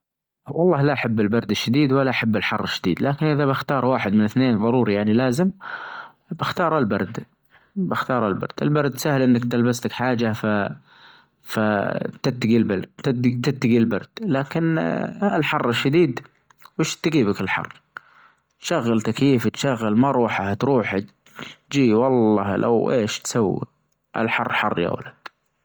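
The speech has a breathy, grainy edge throughout, with the upper spectrum hissy. The cause is likely Bluetooth LC3 compression working at a low rate, one that fits about 32 kbps in 10 ms frames, where noise fills zeroed high bands and there is nothing above about 20.1 kHz.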